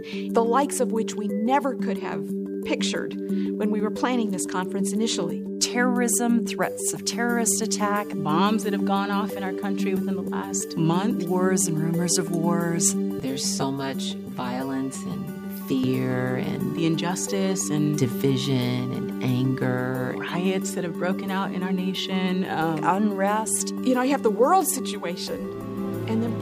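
From 13.20 to 15.84 s, channel delay causes comb filtering: one channel lags around 10 ms, hollowing the mono sum. A spectrogram shows evenly spaced notches from around 40 Hz.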